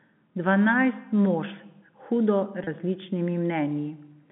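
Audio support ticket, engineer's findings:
Packet loss with pitch repetition, 2.64 to 2.67 s. Brief held, buzzy quality for about 30 ms, consistent with a single dropped packet. Receiver concealment repeated the last pitch period to fill the gap. Sits on the telephone-band G.711 line, 150 Hz to 3.4 kHz.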